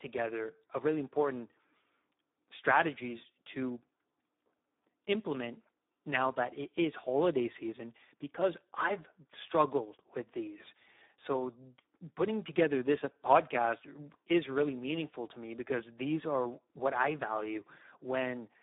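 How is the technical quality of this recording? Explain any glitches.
The technical quality is poor, with heavy low-bitrate speech coding damage throughout.

Speex codec, across the whole clip: the speech is confined to roughly 200 Hz to 3.7 kHz, with nothing above 3.8 kHz. The encoder starves the excitation of bits, consistent with about 8 kbps, leaving the voice hoarse, noisy and edging toward robotic.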